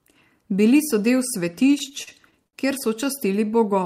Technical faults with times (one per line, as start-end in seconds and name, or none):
1.67-2.55 repeated stalls (stutter)